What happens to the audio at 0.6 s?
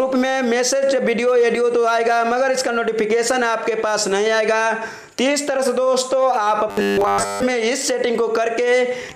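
Nothing goes wrong at 0.6 s; the audio plays through that moment intact, with no dropout, click or other fault.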